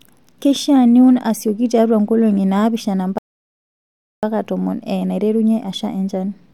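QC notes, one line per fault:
3.18–4.23 s, rebuffering stall: the speech stops dead and the track goes silent for about 1.05 s. Then it picks up at the exact point where it broke off. No audio is skipped or repeated. The player has run dry of downloaded data and waits for more to arrive before continuing. So the gap is pure added time, not a dropout. The speech on either side joins cleanly, with a pause that was never in the recording.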